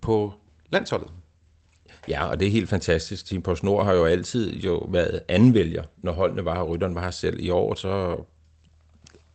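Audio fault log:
No faults detected.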